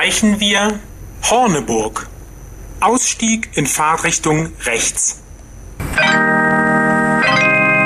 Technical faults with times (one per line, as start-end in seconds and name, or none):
1.72-2.25 DAB burbling
4.24-4.44 DAB burbling
6.09-6.14 DAB burbling